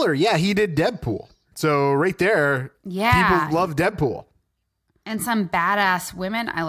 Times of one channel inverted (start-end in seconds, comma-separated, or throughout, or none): none